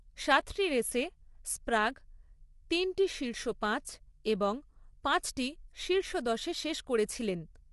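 From start to finish the speech has a rough, grainy texture, with a hiss filling the gaps between the harmonics and nothing at all above about 11.6 kHz. That points to low-delay AAC compression, likely AAC-ELD as used on video calls. Its short frames can't separate the pitch harmonics cleanly, and at a rate that sounds like roughly 32 kbps the encoder runs short of bits, so the damage is plainly audible throughout.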